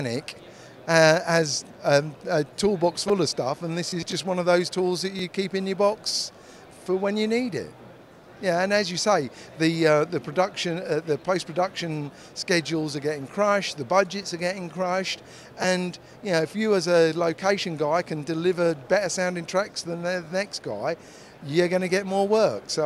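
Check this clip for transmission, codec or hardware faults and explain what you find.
One fault runs through the clip, overlapping chunks. A brief click or stutter recurs at 2.18, 5.19, 8.21, 11.22, 14.23, 17.24 and 20.25 s. The audio was handled in 3.0 s chunks, each starting 12 ms before the previous one ended, so that sliver plays twice at every join.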